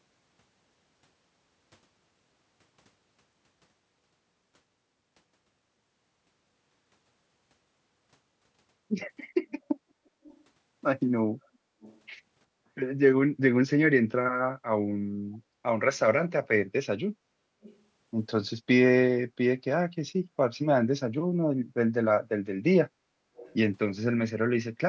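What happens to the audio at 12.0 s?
An echo leak runs from 11.81 to 12.0 s. The echo canceller on the loudspeaker side of the call likely let through some of what its microphone picked up, and that residue was sent back. What you hear is a faint, delayed copy of the speech arriving 375 ms behind the original and sitting well below it, a brief ghostly repeat that trails the voice until it stops at 12.0 s.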